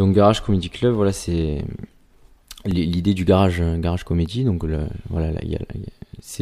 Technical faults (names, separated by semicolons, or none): block of digital silence